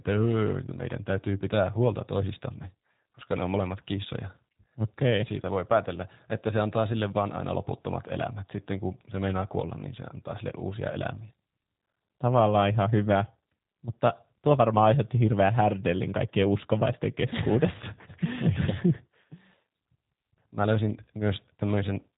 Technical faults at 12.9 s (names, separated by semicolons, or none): G.729 codec